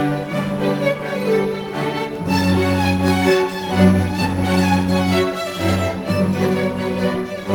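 From 1.69 s to 3.31 s the music carries CD scratch ticks: eight short ticks, the longest only a few milliseconds, arriving at about five per second. A blemish on the disc corrupted more data than error correction could rebuild on each revolution, so the player patched or muted those samples. Unlike vinyl crackle, whose clicks fall at random, these repeat at the steady spacing of the disc's rotation.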